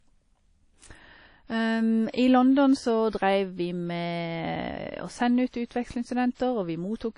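Throughout the speech, the sound is washy and plainly ringing, with a hiss that rises and falls with the level, and nothing is present above 10.1 kHz. This is likely WMA compression at a low bitrate, around 32 kbps, zeroing weak detail.

Pre-echo appears three times: from 2.10 to 2.14 s, from 3.10 to 3.13 s just before "vi med å sende", and from 6.34 to 6.40 s. Each attack is preceded by a brief hiss of 33, 29 and 53 ms, and its onset sounds softened, because noise scaled for the loud attack spread back across the quiet moment before it.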